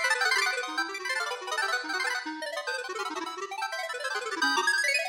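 Throughout, a wrong sample rate plays the sound three times too fast and about 19 semitones high, consistent with 16 kHz material played back at 48 kHz without conversion.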